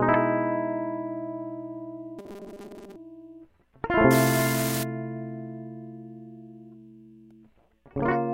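From 2.19 to 2.96 s the music collapses into a rigid, metallic buzz at 200 Hz. This is robotic sound from repeated short buffers. The likely cause is late-arriving audio, with a 5 ms chunk looped over and over while roughly 70 percent of the real material is skipped.

From 4.11 to 4.83 s a steady crackle and fizz sits on top of the music. This is an unreliable data bit. One bit keeps flipping at random, and each error adds a spike of identical size.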